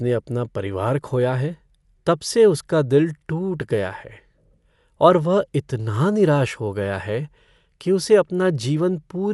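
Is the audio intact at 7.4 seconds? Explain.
No. At 7.4 seconds the speech carries the same damage as the rest of the clip, from start to finish. It sounds like Dolby Digital compression, likely at a low bitrate, around 64 kbps. Nothing is left above about 11.4 kHz, so the speech sounds dull. The coder strips bits from many frequency lines, and the decoder fills them with dither noise. That leaves a rough, fluttering grain around the tonal parts of the sound.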